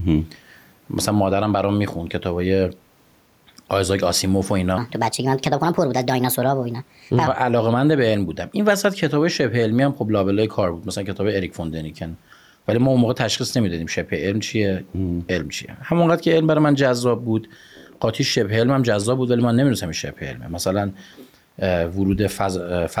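All the way through, there's gain pumping: loud and soft parts are pulled closer in level and the sound is squashed, the gain swinging around 10 dB. It's likely the mic gain set far too high, with a fast limiter clamping down each time. The quiet room noise sits about 45 dB below the speech.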